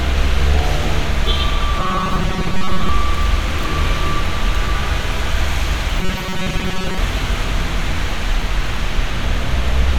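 Robotic sound from repeated short buffers appears from 1.79 to 2.89 s and again from 6.00 to 6.98 s. Both times the sounds collapse into a rigid, metallic buzz fixed at 188 Hz, with most of the original material gone and only a rough outline of it left. The likely cause is audio arriving too seldom, so that a fragment of roughly 5.3 ms is looped to fill the gaps, which sets the buzz's pitch.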